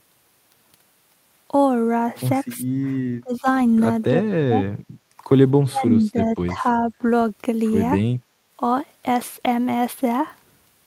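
At 2.57 to 2.7 s and again at 3.21 to 3.47 s, the speech suddenly sinks. It drops deeply, by roughly 25 dB, in short pieces. This is speech suppressed in double talk. The likely cause is an echo canceller that cannot tell the local talker from loudspeaker echo while both sides talk. It turns everything down.

From 4.9 to 5.16 s the room sound dips by about 9 dB, then comes back. This is background gated by the echo canceller. The canceller clamps the microphone while the loudspeaker plays.

From 5.69 to 6.63 s the speech is held down again, for well over half a second. It drops by roughly 25 dB. Double-talk suppression is the likely reason. At 6.8 to 7.04 s a shallower dip follows, only a few decibels deep.

From 8.12 to 8.44 s the background drops again, by about 11 dB. It returns when the canceller releases.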